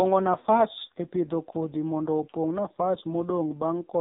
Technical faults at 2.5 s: AMR narrowband mobile codec

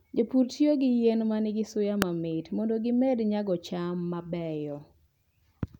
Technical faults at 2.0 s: electrical switching spike

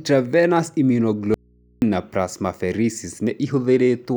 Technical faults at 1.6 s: audio dropout to a faint residue

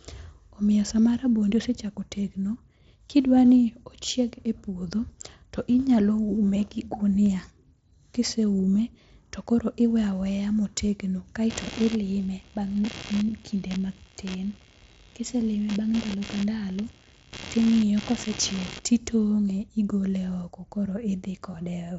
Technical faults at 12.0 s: computer activity noise

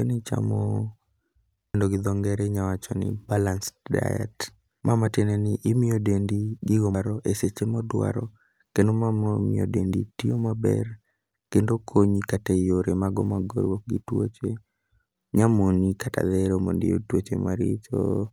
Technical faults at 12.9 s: none

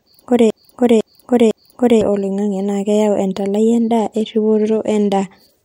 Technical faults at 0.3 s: broken-record loop

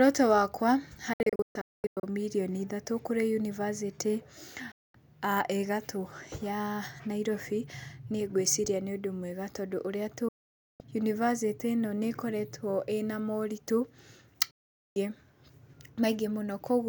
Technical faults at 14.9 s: digital broadcast dropout

